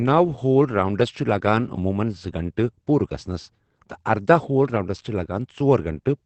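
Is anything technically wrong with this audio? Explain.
Yes. Throughout the speech there is audible Opus voice compression. It sounds muffled and slightly hoarse, with a faintly robotic edge, and nothing is left above about 8.6 kHz, so sibilants and breath lose their air. The top cut-off points to Opus running in wideband mode with its linear-prediction SILK coder. The clearly audible damage fits a low bitrate of around 12 kbps, where the excitation signal driving the vocal model is coded coarsely.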